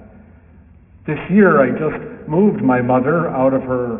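The audio carries aliasing throughout its 4 seconds: it was taken down from 44.1 kHz to 6 kHz with no filter first, so content above 3 kHz folds back below that edge as unrelated, wrong pitches sitting roughly 25 dB under the signal, and the spectrum runs right up to 3 kHz. That separates it from plain band-limiting, where a filter simply removes the top and leaves a clean, dull band with nothing new added.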